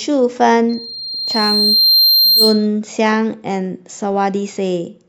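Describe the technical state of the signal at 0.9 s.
At 0.9 s there's loudspeaker feedback squeal, running 0.69 to 2.67 s: the mic re-amplifies the speaker around 4.2 kHz, swelling over a second and a half to about 5 dB above the speech.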